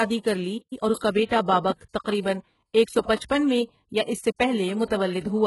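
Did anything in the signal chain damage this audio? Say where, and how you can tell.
Yes, at the codec stage, throughout the speech. The treble sounds rebuilt: s sounds come across gritty and metallic, harmonics in the upper range don't line up with those below, and nothing reaches above 11.5 kHz. The damage is heavy throughout. This likely comes from HE-AAC compression at a very low bitrate, around 12 kbps. The encoder keeps only the lower spectrum and fills in the treble by copying lower bands upward under a coarse envelope.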